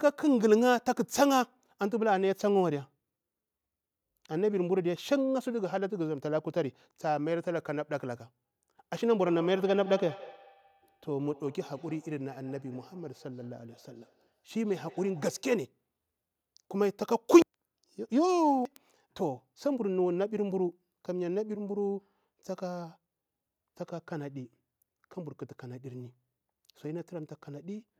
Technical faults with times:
9.20-15.54 feedback echo between two devices

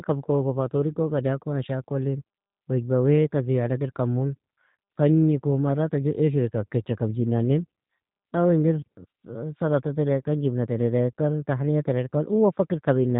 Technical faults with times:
0.00-13.20 G.729 codec

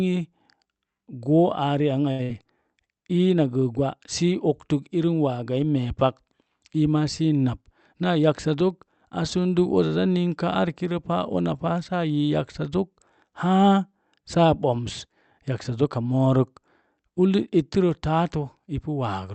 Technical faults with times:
2.11-2.33 short stall from a late packet
2.23-2.31 burst of packet loss
7.48-8.55 jitter buffer speed-up

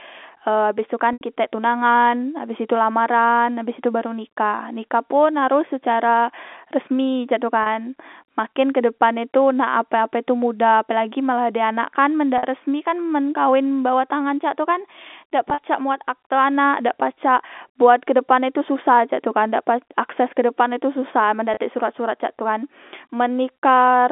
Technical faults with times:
1.13-1.21 packet loss with pitch repetition
7.63-7.66 packet loss with pitch repetition
12.38-12.43 packet loss with pitch repetition
15.50-15.58 packet loss with pitch repetition
21.54-21.57 packet loss with pitch repetition

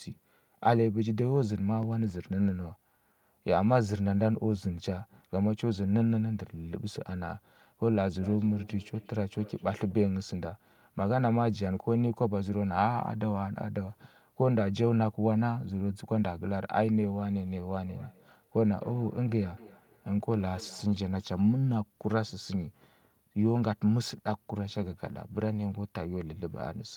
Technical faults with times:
8.21-10.05 feedback echo between two devices
17.85-20.94 feedback echo between two devices

